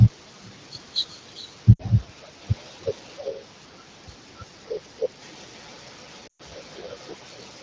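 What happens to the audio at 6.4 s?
Lost AMR speech frames run from 6.27 to 6.42 s, about 120 ms, consistent with six 20 ms frames. The decoder conceals the loss by repeating the last good pitch and vocal tract settings at falling gain, so the speech smears, then quickly fades out. That smeared fade, not an abrupt silent cut, separates it from a plain dropout.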